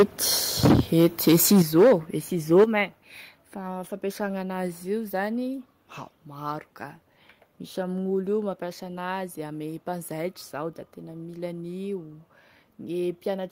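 Harsh, crackling flat-topped peaks appear at 0.0 to 0.03 s, where about half the samples were flattened at the converter's limit about 10 dB over; at 0.63 to 1.93 s, the longest and worst stretch, about 16 dB over with a smaller share flattened; and at 2.56 to 2.64 s, about 5 dB over. This is likely microphone overload. The input drove the converter past its limit, so the wave tops are sheared off rather than turned down, leaving buzzy distortion instead of a quieter sound.

Right at 2.64 s, immediately after that last distorted peak, the whole level falls by about 8 dB in a single step. This is likely a microphone volume step-down. Voice and background drop together and stay lower, with no gradual fade or pumping, which separates it from compression or automatic gain riding.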